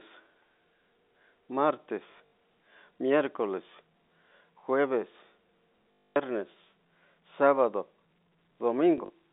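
Packets were dropped in this speech clip, and the receiver replayed the last one to fill each gap: packet loss with last packet repeated. This produces short robotic stutters and a 50 Hz buzz, fitting 20 ms packets, at 2.12–2.31 s, 5.93–6.16 s (the longest) and 8.98–9.10 s, over the narrow telephone band.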